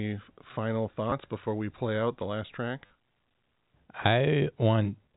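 Speech over a G.711 telephone path, band-limited below 4 kHz, hit by packet loss with last packet repeated at 1.10 to 1.12 s and 2.86 to 2.90 s: the receiver replayed stale audio, producing brief robotic stutters, with a repeat length that fits 10 ms packets.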